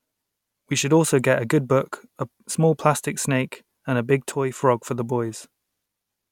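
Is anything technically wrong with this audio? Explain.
Yes, there's a sudden gain jump from 4.32 to 4.62 s, right after "snake and a big" and before "for the". The speech and background noise drop together by about 6 dB and snap back. That's likely a gain setting applied instantly, with no ramp.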